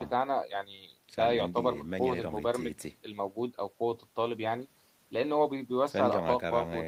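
Speech recording with no audible technical faults.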